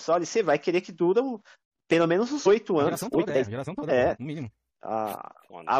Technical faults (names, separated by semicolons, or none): compressed frames skipped; time-stretched section